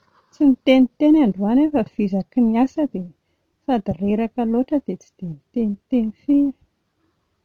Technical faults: sample clock jitter

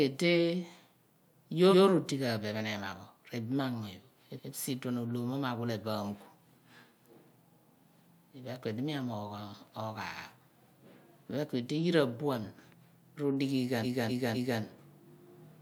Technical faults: repeated frames

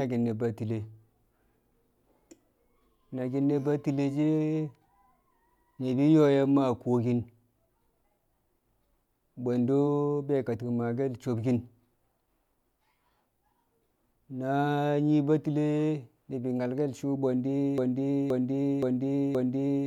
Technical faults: broken-record loop

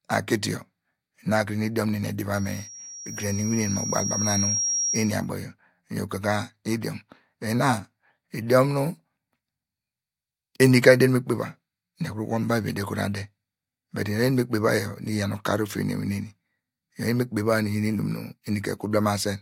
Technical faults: loudspeaker feedback squeal

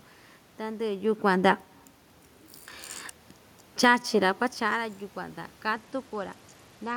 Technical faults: automatic gain falling; automatic gain rising; Bluetooth SBC bit pool drop

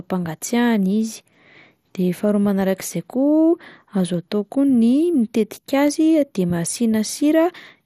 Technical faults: MP2 compression

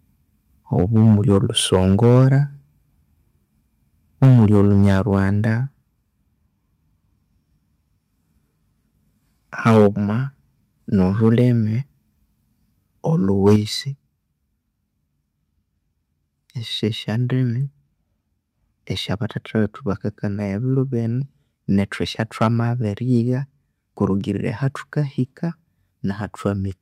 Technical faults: microphone overload; microphone volume stepped down

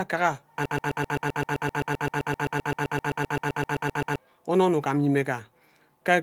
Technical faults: broken-record loop

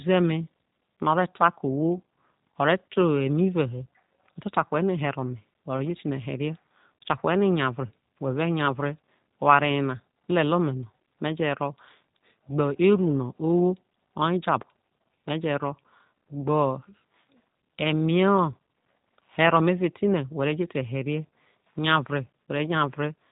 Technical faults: G.729 codec

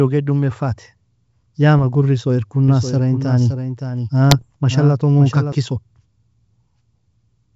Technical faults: doubled audio track; bit errors on an ADPCM link

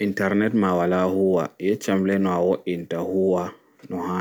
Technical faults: none

